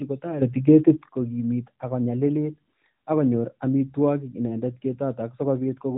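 A speech recording, band-limited below 4 kHz by the AMR narrowband mobile codec, has a sudden gain jump of about 10 dB from 0.42 to 1.09 s, ending just before "kogimit ak konyalilit ak". It is likely an unramped gain change; unlike compressor pumping, the level steps instantly and the background noise moves with it.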